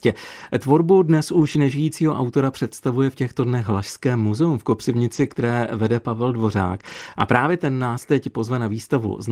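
Speech, with brief stretches that turn rough. At 0.39–0.45 s, 1.33–1.55 s, 5.13–5.31 s (just after "muzeum v") and 6.75–7.13 s, the sound grows grainy and noisy but never drops out. This is a lost packet rebuilt from error correction. The following packets carried low-bitrate copies, and the decoder played those instead. Right after, at 5.33–5.37 s, comes a short concealed packet loss. About 20 ms never arrived. The decoder extended the preceding sound to fill it, leaving a brief smear before the real audio resumes.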